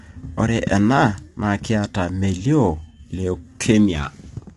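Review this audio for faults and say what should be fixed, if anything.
Throughout the speech, the voice sounds rough and grainy, and nothing is present above 11.5 kHz. This is likely low-delay AAC compression, of the AAC-ELD kind used for video calls. Its short frames cannot separate the pitch harmonics well. Coding noise then fills the gaps between them. The top band is cut away to save bits. The damage is plainly audible, which fits a bitrate around 32 kbps. To prevent it, raise the bitrate or use a higher-resolution codec.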